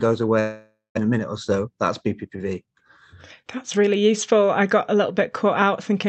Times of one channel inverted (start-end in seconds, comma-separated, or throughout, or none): none